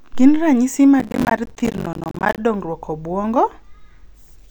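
Speech, with processor overload crackle from 1.00 s to 2.38 s. Audio buffers of roughly 10 ms are missing their deadlines many times in a row, and each miss drops a short hard-edged silence into the signal, heard as a gritty tearing crackle until the load eases.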